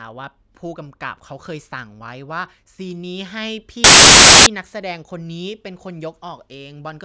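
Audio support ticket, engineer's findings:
File tags played as audio, 3.84–4.46 s. Roughly 0.62 s burst of very loud white noise with hard edges, cutting into the speech. Probable component: decoder/demuxer. Embedded cover-picture block read as samples. Compressed image bytes are near-random, hence flat, very loud static. Check tag parsing and skip metadata before handing data to the audio path.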